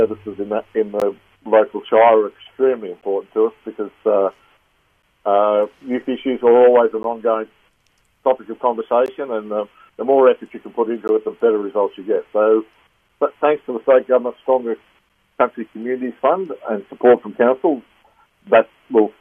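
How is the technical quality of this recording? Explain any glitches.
Technical quality is marred by one recurring fault, a gap between stream segments, heard as brief hard-edged dropouts at 1.0, 3.01, 5.02, 7.03, 9.06, 11.08, 13.09 and 15.09 s. Each lasts 6 to 18 ms, and the two-second spacing fits 2-second segments whose timestamps leave small holes that the player fills with silence, so no audio is lost. The waveform shows flat lines with abrupt edges, and the spectrogram shows thin blank vertical stripes.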